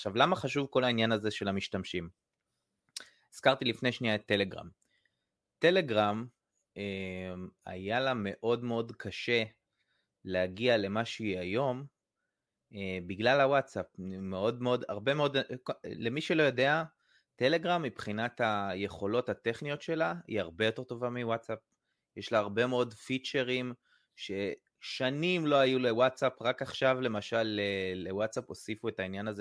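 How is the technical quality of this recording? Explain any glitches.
No technical faults can be heard in this recording.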